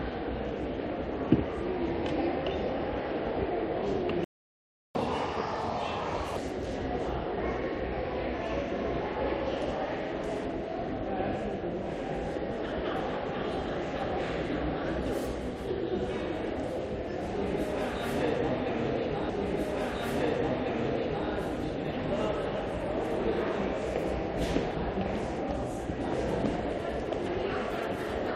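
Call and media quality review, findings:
Playback stall, 4.24 to 4.95 s: sound cuts out mid-flow for 0.71 s of silence, then resumes where it stopped. Likely player-side, with the buffer running dry or the audio thread blocked, so nothing reached the output until recovery.

Catch-up at higher speed, 4.95 to 6.37 s: sound runs 1.5 times fast and audibly higher, roughly seven semitones up, then snaps back to normal. Player resampling the backlog left by the stall to regain the lost time.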